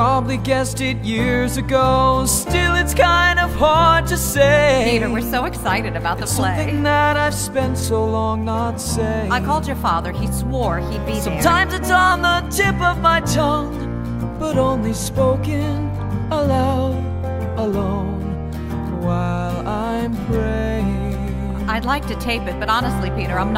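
The sound carries a drift correction step from 10.72 s to 12.12 s: playback runs about 5.4% fast, raising pitch by roughly 91 cents, just short of a semitone, before snapping back. The likely cause is clock-matching software changing the rate in a single jump to rebalance its buffer. On a spectrogram, every harmonic line steps upward for that span and then drops back. The waveform shows slightly compressed periods there.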